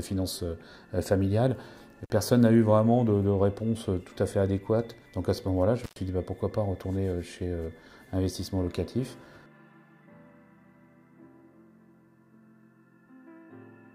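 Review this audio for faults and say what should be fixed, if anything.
A loose plug or cable briefly lost contact, an intermittent contact fault, at 2.04 to 2.11 s and 5.84 to 5.96 s, cutting the sound for about 44 ms and 103 ms, with crackle at each edge and faint hiss in the gaps. Reseat or replace the connector and secure the cable so it cannot shift.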